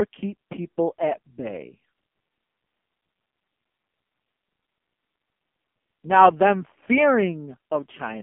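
Throughout, the speech shows heavy AMR narrowband mobile codec damage: nothing above 3.5 kHz remains, and the buzzy, synthetic tone suggests a bitrate near 5 kbps.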